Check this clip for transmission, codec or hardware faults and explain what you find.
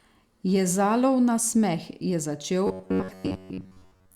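One fault: from 2.67 s to the end at 4.15 s, robotic sound from repeated short buffers. The speech becomes a rigid metallic buzz near 93.8 Hz, likely from looping a roughly 10.7 ms block across most of the stretch. Unlike dropouts, no gaps appear.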